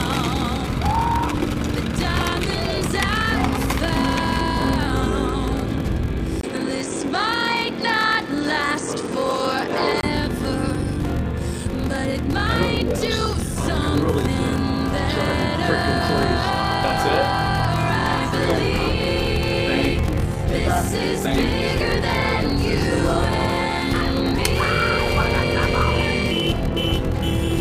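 From the first moment to the end, a steady buzz at 43.1 Hz runs under the sound, and everything plays slowly, at 0.861 times normal speed, while the pitch stays about where it should be. This is a block size mismatch (padded). Each block handed on is shorter than the 1024 samples the next stage reads, so the shortfall is filled with zeros. That tiny gap in every block produces the buzz and stretches the timing.

At 6.41 s a silence of about 20 ms breaks in, and the sound turns duller and narrower. A faint new background appears, well below the signal at about 50 dB down, and the loudness stays roughly the same. At 10.03 s the fuller tone returns. The likely cause is the input switched to a poorer device partway through, a microphone or headset path with a narrower band and its own noise.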